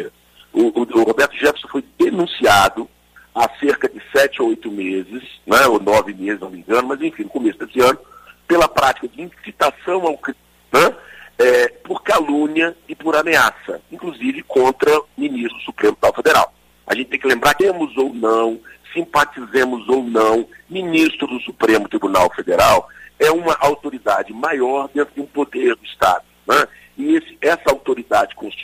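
The audio jumps forward three times, at 10.27 to 10.33 s, 15.47 to 15.53 s and 17.56 to 17.61 s. This is compressed frames skipped. Whole frames of 46.4 ms never reach the output, so the sound resumes later than it should. The losses are roughly 400, 200 and 500 ms, which points to several frames dropped at each jump.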